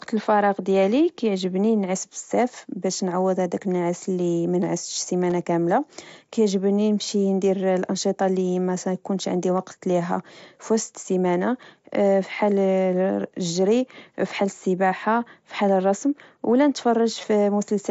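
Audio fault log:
5.30, 13.61 and 17.22 s, concealed Bluetooth headset packet loss: speech packets between headset and phone went missing, and the receiver filled each gap by repeating the best-matching recent stretch of waveform. The gaps last about 15 ms, 7.5 ms and 15 ms. The single loss at 13.61 s is nearly hidden; the two-frame runs at 5.30 and 17.22 s sound like a brief buzzy tone held at full level, with a small warble where real audio returns.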